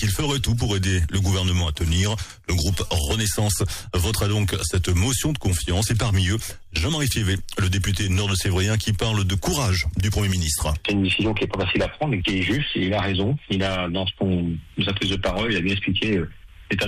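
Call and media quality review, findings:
GSM phone buzz, 1.75 to 3.01 s. Hard, raspy buzz at about 217 Hz with a dense harmonic stack, sitting about 26 dB under the signal and unrelated to it. A nearby 2G handset is bursting during a data transfer, and the audio input stage is rectifying the RF pulses. It appears as one short patch rather than a steady drone.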